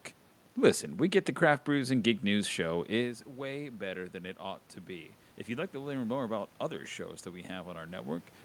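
From 2.72 s, just after "brews and geek news", the voice drops sharply and then slowly swells back over about four seconds, with the room noise rising alongside it, until about 6.9 s, just before "that we". This is automatic gain rising. Around 3 s the talker moved away, cutting the level at the microphone by about 14 dB, and the gain control answered by gradually adding about 5 dB, lifting voice and background together.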